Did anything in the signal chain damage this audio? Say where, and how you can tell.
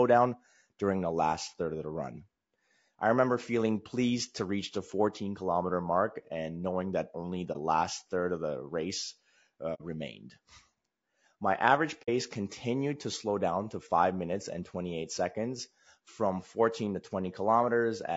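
Yes. At the codec stage, the speech sounds rough and grainy throughout, with noise filling the gaps between pitch harmonics and a thin, synthetic top band. That likely points to low-delay AAC compression at a low bitrate, around 32 kbps. Its short frames resolve harmonics poorly. On a spectrogram, the harmonic lines look smeared and hazy, and the upper band is patchy.

At the network stage, AAC frame loss with muting leaves brief soft-edged holes at 7.52 s (about 0.05 s), 9.74 s (about 0.08 s) and 12.02 s (about 0.07 s). The decoder zeroed the missing spectrum, fitting one or two lost frames each time. On the waveform, the envelope tapers to silence and back.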